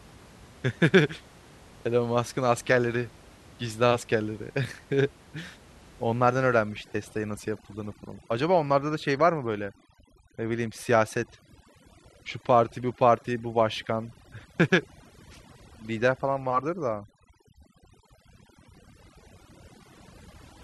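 A speech recording with room noise sitting about 26 dB below the voice until 6.61 s, where overdone noise removal takes over to the end: the background noise drops and breaks up into twinkling specks, and quiet voice components vanish. A spectrogram shows isolated bins flickering on and off and a hollowed, gappy voice.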